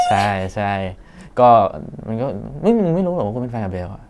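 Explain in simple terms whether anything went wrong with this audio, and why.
Nothing stood out when listening to this speech recording; there was no point where the sound faltered or changed in a way that would suggest something went wrong.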